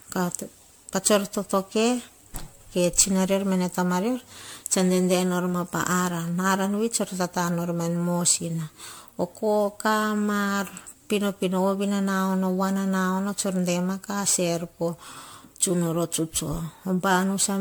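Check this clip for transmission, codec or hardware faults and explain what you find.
There is one fault, present throughout the speech. Generation loss: the hollow, swirly smearing and blurred attacks likely come from MP3 re-encoding around seven times near 100 kbit/s, with quantisation noise and spectral holes compounding.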